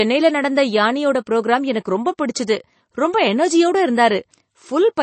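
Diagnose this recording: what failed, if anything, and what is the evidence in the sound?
MP3 compression damage runs throughout the speech, likely from a codec stage. Nothing is present above 8.3 kHz, and the audible watery artefacts fit a low bitrate around 32 kbps. Short of bits, the encoder discards the treble at a fixed cutoff and zeroes weaker frequency lines.

Pre-echo appears at 2.18 s as a short hiss smeared about 11 ms ahead of a sharp attack, softening it. The codec spreads quantisation noise across its whole transform block, so noise sized for the loud attack also leaks into the quiet moment before it.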